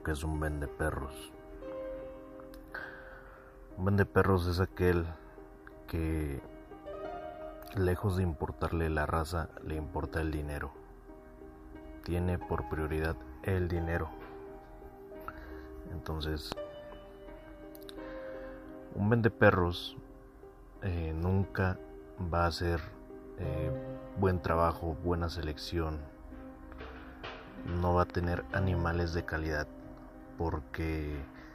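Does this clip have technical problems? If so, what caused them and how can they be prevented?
Yes, there are two loud pops. The first, at 16.52 to 16.54 s, is a single sharp hit that jumps well above the surrounding sound. The second, at 28.10 to 28.26 s, is a quick double pop that sits only a little above the level. The sound keeps going underneath both. The likely cause is a sudden voltage spike from a plug, switch, static or driver glitch, briefly shaped by the circuitry after it. To prevent this, keep connectors seated, avoid touching switches or cables mid-take, and keep drivers stable.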